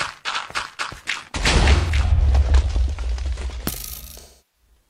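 At 1.76 s a smeared, noisy, phasey patch runs to 2.20 s, and at 4.17 s a similar stretch lasts until 4.66 s. This is AAC frame loss with concealment. The decoder lost frames and filled each gap by reusing the last good spectrum. The first patch covers about 213 ms of loss scattered over 427 ms, with its longest run around 150 ms. The second covers about 341 ms, which fits eight lost frames.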